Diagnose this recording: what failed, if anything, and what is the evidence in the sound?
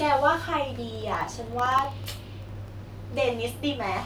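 The driver or USB transport is the culprit: periodic USB or driver dropouts. From 0.89 s to 2.68 s the speech picks up a steady run of small ticks, about thirty of them, spaced 64 ms apart, roughly 15 a second. Each one is a tiny gap, around half a millisecond, where the samples just went missing and silence took their place. That metronome-regular spacing points to some background task stalling the bus or the audio driver on a fixed schedule.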